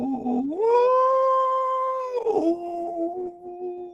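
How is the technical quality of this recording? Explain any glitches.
The quality is compromised by a speech-tuned noise suppressor processing this music. It arrives through a call codec whose top end stops near 12 kHz.

Throughout, the noise suppressor applied to music keeps mistaking sustained tones and decays for noise. Level swings by roughly 15 dB: attacks pass, held notes sink and flutter. Unlike compressor pumping, the dips follow how steady the sound is, not how loud.

From 2.56 to 2.74 s, sound is cut by the noise suppressor, dropping about 6 dB as the sound is judged noise-like. This is a brief sag rather than silence, so it isn't a dropout.

From 2.91 s to the end, the cut deepens to about 16 dB, pulling down what the suppressor takes for noise.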